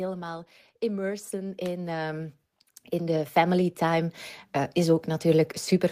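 The automatic gain control judged its input too quiet and twice raised its gain, slowly rather than in a step. From 0.79 to 2.42 s the gain climbs by about 8 dB, and from 2.99 to 5.55 s by about 7 dB. Each automatic gain rise lifts the speech and the background noise together, so the whole scene swells steadily louder over more than a second.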